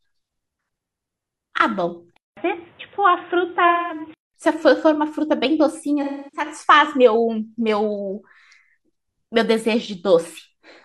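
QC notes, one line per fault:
2.17–4.34 s, input switched to a poorer device: the speech turns dull and boxy, with nothing above 3.8 kHz, and a gap of about 200 ms opens at the switch. A new background hiss sits about 35 dB below the speech, while the overall level stays about the same. The likely cause is the recording input moving to a narrower-band microphone or a headset call profile, which brings its own tone and noise floor until the original input returns at 4.34 s.
3.68–4.00 s and 6.03–6.47 s, AAC frame loss with concealment: two patches of about 213 ms and 299 ms, which fit five and seven lost frames respectively. The decoder fills each gap by reusing the last good spectrum with scrambled phase or interpolated energy, so the speech turns smeared, noisy and phasey rather than dropping out cleanly. The first loss falls inside the narrowband section.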